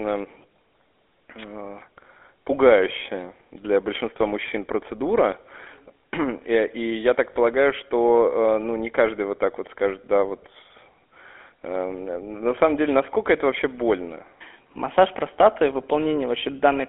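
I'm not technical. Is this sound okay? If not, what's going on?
No. The whole recording went through the GSM full-rate codec, an old mobile-phone format. Voices sound buzzy and gravelly, and nothing above 3.6 kHz survives.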